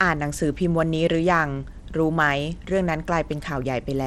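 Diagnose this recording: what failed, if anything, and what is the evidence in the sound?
Bluetooth SBC compression throughout, at codec stage: the speech's treble flickers and turns gritty, likely from starved top sub-bands, which fits a 96 kbps stream.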